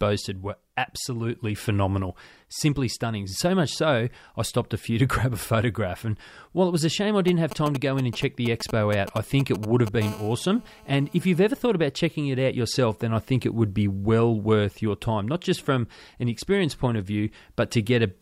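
Just after "was a shame I", from 7.28 to 10.03 s, GSM signalling bursts break in: a nearby 2G phone's radio pulses are rectified by the audio circuit, giving galloping dit-dit-dit clusters of ticks and short 217 Hz buzzes, roughly 10 dB below the speech.

At 10.03 s the clusters give way to continuous GSM phone buzz until 11.38 s, ending before "ever thought about checking". The phone is now transmitting steadily, so the raspy, harmonic-rich 217 Hz tone runs unbroken rather than in spurts, at about 20 dB below the speech.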